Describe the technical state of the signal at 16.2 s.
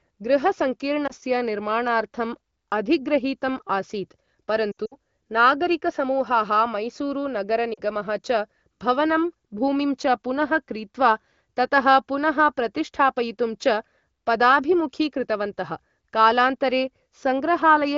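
At 16.2 s the speech is intact, carried cleanly by the AMR wideband (HD Voice) codec at a rate that fits about 16 kbit/s, with no fault at that moment.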